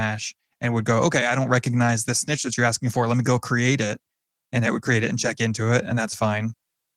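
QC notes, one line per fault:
Nothing to flag here: the speech comes through its Opus voice compression at 20 kbps without any fault worth noting.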